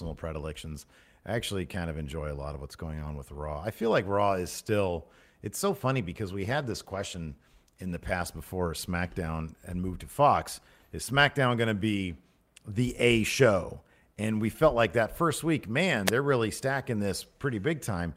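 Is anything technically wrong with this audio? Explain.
Yes, two faults.

From 6.42 to 8.71 s, just after "so funny because", there is a call bitrate drop. The call's bandwidth estimate fell. The encoder went from 40 to 17 kbps, staying lowest for 1.23 s. Coarser coding makes the speech rough and watery.

At 16.06 to 16.11 s, between "like that first week" and "they're really stacking", there is a wireless microphone noise hit. Reflections briefly cancelled the FM radio signal. Receiver noise rose in that 48 ms fade, heard as a short burst of static.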